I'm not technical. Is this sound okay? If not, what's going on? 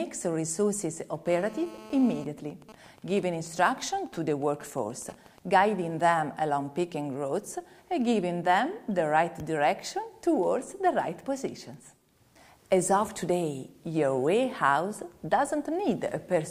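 No, there's interference from a mobile phone sitting near the recording gear. From 1.27 to 2.20 s you get GSM phone buzz: a harsh, raspy drone at about 217 Hz that has nothing to do with the actual sound. An older 2G phone on a call sends its radio signal in bursts 217 times a second, and the audio electronics pick those pulses up and turn them into an audible buzz. It holds steady for that stretch.

Right after, from 2.21 to 5.39 s, it changes into GSM signalling bursts. That's a run of even ticks with a longer buzz twice a second instead of a continuous drone. The phone is still on the call, but the person on it has gone quiet, so it only sends occasional short groups of radio bursts. The audio circuit catches each group and you hear it as a pattern of even ticks, at around the same loudness as the earlier buzz.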